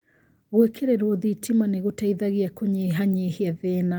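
No technical faults are audible.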